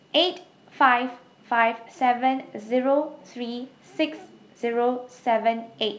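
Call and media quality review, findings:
No call or media quality findings for this speech, which comes through the G.722 wideband path at 64 kbit/s.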